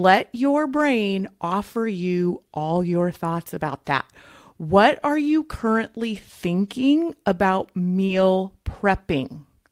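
Speech, with three spots where lost packets were rebuilt from error correction: 0.73 to 0.79 s (about 40 ms rebuilt, consistent with two lost 20 ms packets), 6.13 to 6.15 s (about 20 ms, one packet), and 8.08 to 8.22 s (about 80 ms, likely four packets). Each missing packet was recovered from the low-bitrate copy carried in the next one, so nothing drops out, but those stretches sound rougher and grainier. On a spectrogram they show blurrier, noisier texture with less defined detail than the surrounding frames, and the waveform stays continuous with no gap. Overlapping the start of the last rebuild, a short concealed packet loss runs from 8.05 to 8.10 s. About 40 ms never arrived in time and roughly 31 ms was synthesised by extending the preceding sound before crossfading back into the real signal, giving a brief smeared or wobbly moment. A spectrogram shows the prior frame's pattern stretched out unnaturally steady, and the waveform shows a repeated or noise-like segment fading into the returning audio.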